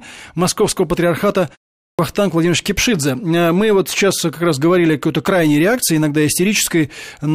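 At 1.82 s there is a clipped start after a pause. It follows a 0.34 s gap. The output device sleeps during the silence and is slow to wake. The first 167 ms of speech is lost. The word then jumps abruptly out of silence, missing its opening sounds.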